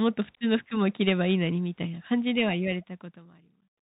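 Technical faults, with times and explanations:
Throughout, Bluetooth CVSD headset codec: the speech is boxed-in and narrow, with scratchy s sounds, a granular hiss underneath, and roughness on louder bright syllables. Nothing above 4 kHz survives, and the one-bit adaptive step lags fast loud changes, which fits a 64 kbps CVSD headset link.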